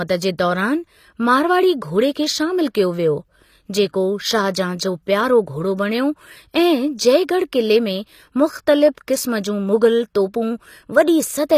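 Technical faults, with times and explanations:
Throughout, HE-AAC compression: the treble sounds present but synthetic, with sibilants coming out gritty and lispy, and nothing reaching above 14.9 kHz. This is likely HE-AAC at a low rate, and the damage is plainly audible, which fits something around 24 kbps. The codec carried only the lower spectrum faithfully and filled the upper range by copying lower bands upward under a coarse envelope, so the high harmonics don't line up with the real ones.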